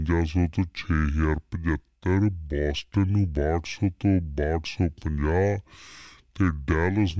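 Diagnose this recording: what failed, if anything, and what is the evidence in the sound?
Playback stage, wrong sample rate: from start to end the speech runs at two-thirds speed and sits 7 semitones low, which fits 24 kHz audio played at 16 kHz. Unlike a time-stretch or pitch-shift fault, tempo and pitch drop together by one ratio.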